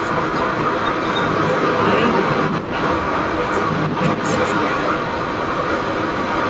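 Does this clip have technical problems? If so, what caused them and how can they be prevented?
Yes. Throughout the clip, from 0 to 6.49 s, a second copy of the speech trails the original by about 0.3 s, about 5 dB louder than the speech. This is likely an echo leak: the other side played the call on a loudspeaker, and its echo canceller failed to remove what its microphone picked up, so that sound was sent back. Headphones at that end, or a better-tuned echo canceller there, would prevent it.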